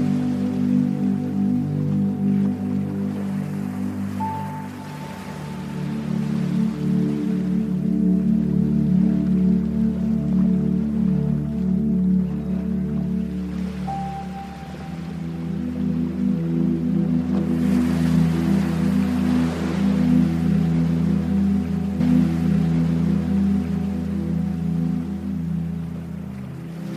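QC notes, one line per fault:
21.99–23.99 s, stream segment repeated: the player fetched or queued the same chunk of the stream a second time, so instead of moving on to the next segment it replays material already heard, adding about 2.0 s to the running time. At 21.99 s the audio jumps back and the preceding stretch plays again, with a small blip at the splice where the playback position snaps backwards rather than continuing smoothly.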